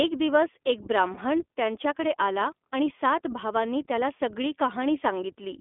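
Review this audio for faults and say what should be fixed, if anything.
The whole clip passes through the iLBC codec. Nothing is heard below 250 Hz or above 3.5 kHz. The speech is clear but plainly rough and synthetic. Each 20 ms frame is coded on its own, which fits the 15.2 kbps mode. Prevention: use a wideband codec such as Opus where both ends support it.

Lost iLBC frames occur from 1.14 to 1.18 s, just after "दिवस एक" and before "त्यांच्याकडे आला आणि सात". The gap sounds like about one 20 ms frame. The decoder repeats the last pitch cycle with added noise, giving a brief buzzy held sound. The speech recovers at once. Prevention: reduce packet loss on the link, or add redundancy or forward error correction to the stream.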